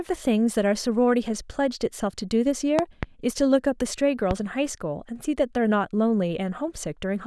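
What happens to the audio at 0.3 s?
Nothing goes wrong at 0.3 s; the speech plays through intact with no dropout, click or distortion at that point.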